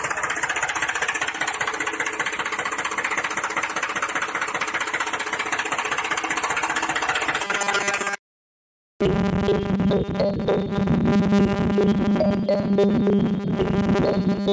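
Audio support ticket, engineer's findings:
Gain pumping, whole clip: gain swings by around 10 dB, ducking under each loud bit, so levels feel squashed. Likely input gain set way too hot, with a fast limiter or compressor clamping down on every peak.

Robotic sound from repeated short buffers, 7.45 s to the end: rigid metallic buzz at 200 Hz that still loosely tracks the sound. Likely audio arriving late, with the last 5 ms looped to fill the gap, so most of the real audio gets skipped.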